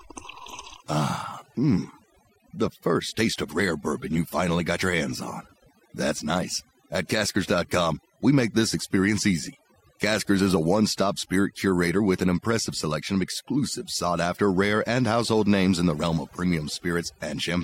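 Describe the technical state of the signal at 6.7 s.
At 6.7 s the speech is affected by overdone noise removal, which runs through the whole recording. A noise reducer set far too aggressively cuts any frequency band it takes for noise, so quieter parts of the voice are removed along with the noise. Between phrases the background drops to near silence scattered with twinkling specks. On a spectrogram the quiet regions show isolated bright dots on a dark floor, and the speech harmonics look patchy and broken.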